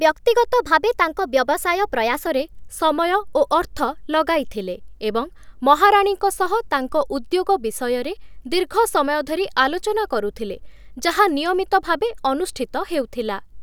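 From 0 to 2.27 s the speech has a wrong sample rate fault. The samples are clocked out faster than they were captured, with no rate conversion. Speed and pitch rise together. Delivery runs about 1.09 times too fast, and pitch sits roughly 1.5 semitones high. Voices sound slightly hurried and higher. That ratio fits 44.1 kHz material played back at 48 kHz.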